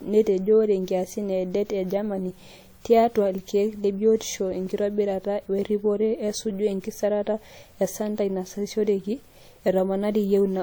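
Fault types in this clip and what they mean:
Transcoding between lossy codecs: The speech carries two stacked sets of coding artefacts, likely from AAC and then WMA, each pointing to about 64 kbit/s. Nothing is heard above 20.1 kHz.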